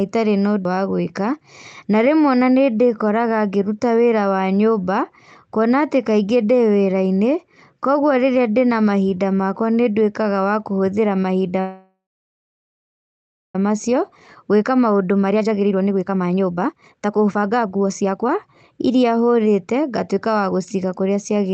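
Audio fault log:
11.60–13.55 s, call audio freeze: the last sound is stretched into a brief fading buzz, then about 1.55 s of silence, 1.94 s of inserted time in all. Speech resumes exactly where it stopped with nothing skipped, unlike packet loss. The likely cause is delayed packets emptying the jitter buffer.
13.69–21.37 s, jitter buffer speed-up: speech runs at about 125% speed, sounding hurried while pitch stays unchanged, which separates it from a sped-up recording. Repeated pitch-period-sized cuts remove about two seconds, draining the backlog left by the preceding freeze.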